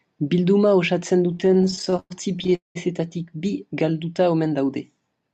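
From 1.31 to 2.77 s the speech breaks into repeated stalls (stutter): the receiving jitter buffer kept running dry as packets arrived late, and each time the last sound was stretched and held, faded in the longer waits up to about 199 ms, before playback resumed. Some two dozen such holds fill about 38% of that span. Unlike packet loss, nothing is skipped; the speech drags and hiccups forward intact, over a call path whose top end stops near 8 kHz.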